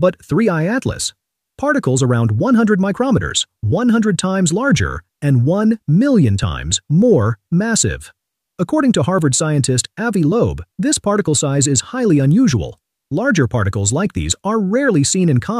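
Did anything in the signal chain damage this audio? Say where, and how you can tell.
No, nothing in the signal chain has left an audible mark on this audio. No moment in it points to trouble at any stage, from the wiring through to playback.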